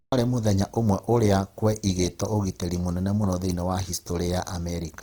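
A speech recording with plainly audible Opus compression throughout: tones turn rough, grainy and noisy, yet content still reaches about 20.4 kHz, likely from a fullband CELT-mode encode near 16 kbps.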